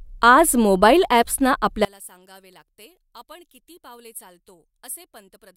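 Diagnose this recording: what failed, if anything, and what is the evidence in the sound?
From 1.85 s, just after "आज मोबाइल ॲप्सना", to the end, the speech collapses by about 27 dB into a faint residue. This is the one channel inverted pattern when the stereo pair is summed to mono: the shared centre content cancels and only the small difference between channels survives. The likely cause is a polarity-reversed lead in the analogue wiring. On the waveform, amplitude drops abruptly at 1.85 s. The spectrogram goes dim.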